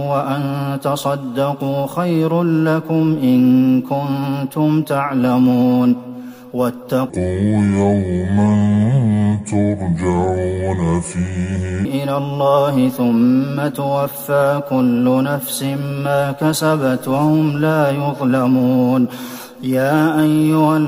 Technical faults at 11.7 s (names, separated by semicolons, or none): section at the wrong speed